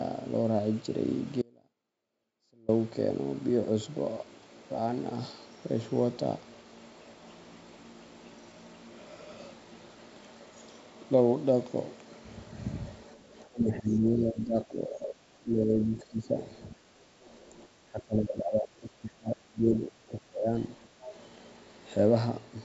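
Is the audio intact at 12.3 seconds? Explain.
Yes, the speech at 12.3 seconds is intact, with no dropout, glitch or other fault at that moment.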